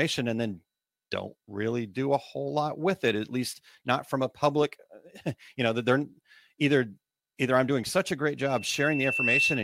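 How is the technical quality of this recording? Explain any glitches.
The recording has one clear fault near the end. From 8.44 s, after "doing such a great", loudspeaker feedback squeal swells over about a second into a steady 2.7 kHz tone that sits a few decibels above the speech. The microphone is re-amplifying its own loudspeaker at that frequency. On a spectrogram it shows as a bright horizontal line; on the waveform, the envelope grows for about a second and then holds.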